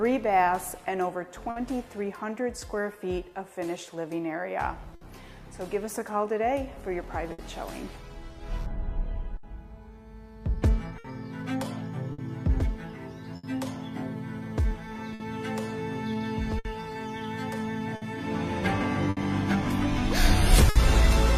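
Clock drift between sender and receiver runs through the whole clip. The sender's clock is about 5 percent slow, so the receiver keeps running short of audio.

Repeated timing corrections run from 0.02 to 20.52 s. The receiver repeats small pieces, playing at 98 percent speed and adding roughly 300 ms.

Short stalls from a late packet hit at 1.50 to 1.58 s, 4.95 to 5.03 s and 7.32 to 7.40 s. Each time the buffer ran dry, and 60 ms of held sound bridged the wait.

Scattered short gaps follow from 9.37 to 20.77 s. About ten holes were patched by continuing the last sound, roughly half a second in all. The longest is about 70 ms. They come through as brief smears and hiccups.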